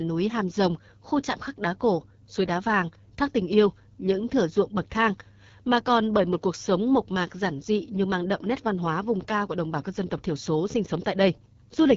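Throughout the speech, the AMR wideband (HD Voice) codec is at work at a low rate, which fits 8.85 kbit/s: the pulse-driven vocal tract model leaves voicing rough and raspy, and nothing sounds above 7.3 kHz. Unlike narrowband telephony, sibilants keep some hissy top, filled in with shaped noise.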